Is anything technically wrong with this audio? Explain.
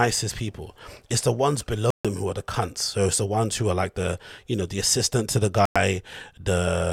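Yes, there are two short gaps in the speech. At 1.90 s, right after "the ones", the sound cuts out for about 0.14 s and comes back on "who are the cunts". At 5.65 s, after "the assistant to the", there's another hole of about 0.10 s. Both are likely a Bluetooth dropout: packets reached the headphones too late and were thrown away, so the output went silent. The sound then picks up as if it had kept playing underneath, so whatever fell in the gap is simply missing.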